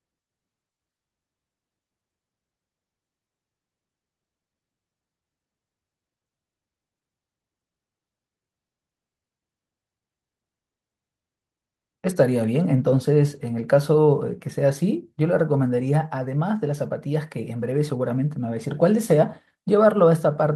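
Nothing goes wrong in this speech clip; it simply sounds like a normal call, with the upper frequencies rolling off around 12 kHz as you'd expect from an Opus call codec at these settings.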